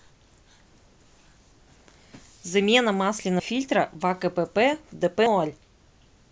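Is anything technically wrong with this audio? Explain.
Yes. The speech skips abruptly twice, at 3.40 s and again at 5.26 s. Each time, roughly 150 ms of sound vanishes and the two sides butt straight together with no gap of silence, so the speech seems to lurch forward mid-flow. This is most likely audio missing between chunks: the recorder handles the stream in 2.0-second blocks and drops a short stretch each time it hands over from one block to the next.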